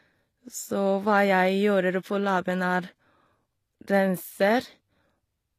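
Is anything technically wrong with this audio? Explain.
Yes. Throughout the speech there is plainly audible codec damage, likely from HE-AAC compression at a rate that fits about 24 kbps. The codec keeps only the lower spectrum and synthesises the treble by copying lower bands upward under a coarse envelope, so the top stays bright but its harmonics don't line up. S sounds come out gritty and lispy, and nothing remains above 14.9 kHz. That falsely bright, metallic treble separates it from a plain low-pass cut, which would just sound dull.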